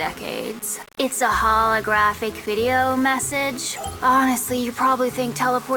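From the very start, the player appears to have opened an adaptive stream at a low bitrate, consistent with Opus at about 32 kbit/s, before switching up once it had measured the connection. Until 4.0 s the sound is duller, lacking real treble, with stronger codec smearing. At 4.0 s the quality jumps abruptly to the higher version, plausibly around 64 kbit/s, with no gap.

Throughout the whole clip, the signal was likely reduced to very few bits and rounded without dither, pointing to roughly 6 bits. This low bit depth without dither leaves an error that tracks the audio, giving a grainy, gritty distortion sitting around 20 dB below the signal. That distortion shifts with the sound and roughens the quiet passages most.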